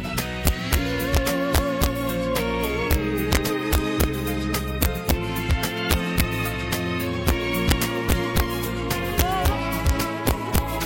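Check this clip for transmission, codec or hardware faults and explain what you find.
One fault runs through the whole clip: integer overflow. Loud peaks break into violent, sharp cracks, harsher than clipping. The signal is driven about 4 dB past the integer limit, so the few samples over it, around half a percent, wrap to the opposite sign instead of being held at full scale.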